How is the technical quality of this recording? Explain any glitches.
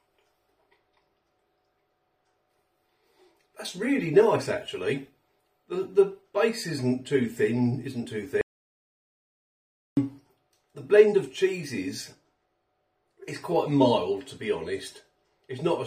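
The recording has one clear glitch. An audio dropout to silence runs from 8.41 to 9.97 s, about 1.56 s long. The input was likely lost while recording continued writing silence, so the sound cuts off abruptly into total silence with no room tone, then resumes mid-flow.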